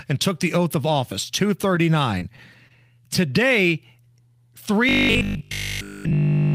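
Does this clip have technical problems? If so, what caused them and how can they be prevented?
Yes. There are three kinds of technical fault.

Short concealed packet loss occurs twice, from 2.19 to 2.32 s and from 2.68 to 2.72 s. Each time about 20 ms of audio never reached the decoder. The receiver extended the preceding sound to cover the gap, 22 ms at the first point and 17 ms at the second, then blended back into the real signal. The result is a brief smear or wobble. Unlike a stall, real audio is lost here. Forward error correction or redundant packets on a more reliable network path would prevent it.

A short stall from a late packet follows at 2.36 to 2.40 s. A packet arrived late, the jitter buffer ran dry, and the last sound was held for 22 ms until the packet came in. Playback then resumed from the same point. Nothing is missing, so this sounds like a sound held slightly too long rather than clipped short, and the overall delay grows by 22 ms. 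An adaptive jitter buffer with more headroom would prevent it.

Robotic sound from repeated short buffers runs from 4.89 s to the end. The sound becomes a rigid, metallic buzz at 50 Hz. That pitch fits a single 20 ms block being replayed over and over while fresh audio is skipped, and essentially the whole stretch is made of repeats. A concealed loss is a brief smear, but this is a sustained, fixed-pitch drone. The likely cause is audio arriving too seldom from a starved or overloaded processing thread. Giving the audio thread higher priority and larger, steadier buffers would prevent it.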